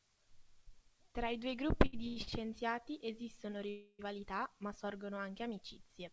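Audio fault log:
1.86–2.29 s, repeated stalls (stutter): Right after "i due" the speech catches four times in under half a second. Each gap is filled by carrying the last sound forward, and the longest lasts 88 ms. About 210 ms of fill is added in all, roughly half of this span, yet no speech is lost. The packets arrived late again and again, so the jitter buffer kept running dry. The speech drags and stutters rather than dropping out.
3.70–4.01 s, call audio freeze: Just before "ma sorgono anche" the speech stops for 288 ms. The last sound is held and fades, and the final 60 ms are silent. Then the speech resumes exactly where it left off, so nothing is missing. The pause simply pushes everything after it 288 ms later. The likely cause is packets held up in transit, which left the jitter buffer empty until they arrived.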